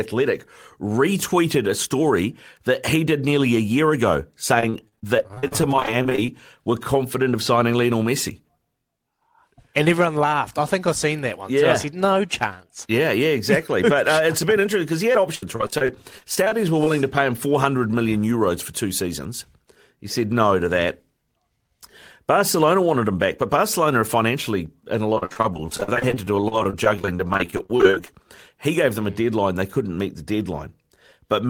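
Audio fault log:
4.60–6.29 s, repeated packet loss (robotic sound): after "nearly a year ago", frequent dropouts up to 39 ms are patched by extending prior sound, giving choppy speech.
15.13–16.87 s, repeated packet loss (robotic sound): after "bit interesting because he", sparser dropouts, longest 67 ms, are filled by repeating earlier sound, so speech stutters before "to pay him".
25.15–28.09 s, repeated packet loss (robotic sound): after "financially in a", dense dropouts up to 47 ms are concealed for over a quarter of the span, producing sustained choppy, broken speech.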